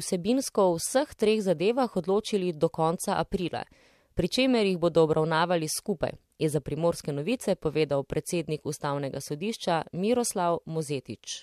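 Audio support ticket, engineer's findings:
No fault found: the speech clip was reviewed in full and no audible defect was detected, so no component is implicated and no action is required.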